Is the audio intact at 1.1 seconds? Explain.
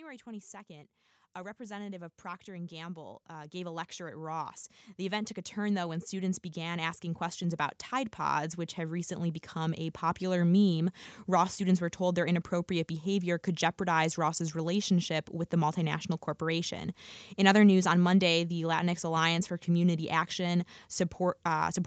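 No. At 1.1 seconds the clip is inside a stretch of automatic gain rising that runs from 0.25 to 10.03 s. The gain control judged the incoming level too low and kept pushing its amplification upward, by about 18 dB over that span. Because the gain is applied to the whole signal, the speech and the background noise swell together, so the level is still climbing at this point rather than holding steady.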